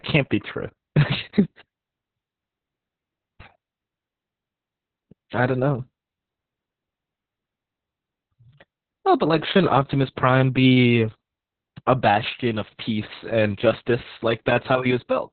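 Heavy Opus voice compression runs through the whole speech clip. Nothing survives above about 4.3 kHz, so the band is cut to narrowband, which fits a bitrate near 6 kbps in SILK mode. Unlike simple low-pass filtering, the coarse excitation coding adds a hoarse, slightly robotic, muffled quality.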